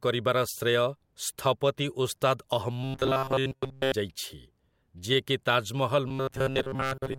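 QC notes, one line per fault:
2.84–3.92 s and 6.08–7.19 s: robotic sound from repeated short buffers. The speech collapses into a rigid metallic buzz fixed at 133 Hz, likely because a roughly 7.5 ms chunk is replayed while most incoming audio is skipped.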